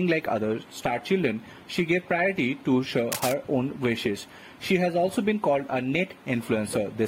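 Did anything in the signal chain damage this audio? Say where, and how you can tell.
Yes, in the analogue wiring. From 3.12 to 3.33 s, irregular scratching rides over the sound at nearly the same level. This is cable scratch noise, likely from a worn cable or connector whose contact resistance fluctuates as it moves. A digital click would be one sharp edge, not this rustle.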